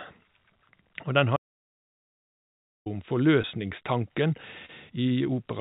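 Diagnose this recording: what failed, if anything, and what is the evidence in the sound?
Audio dropout to silence at the capture or device stage: from 1.37 s to 2.86 s, about 1.5 s, the sound cuts off mid-flow and returns abruptly, with no room tone in between. The waveform goes flat and the spectrogram shows an empty block. The likely cause is a lost input while zeros kept being written.

Short concealed packet loss on the network side of the call, at 3.42–3.46 s and 4.66–4.71 s, each fitting one missing 20 ms packet. The decoder stretched the preceding sound, then blended back, so each is a brief smear. On the spectrogram, which is empty above 4 kHz throughout from the G.711 call codec, each appears as a short, smoothed patch instead of a gap.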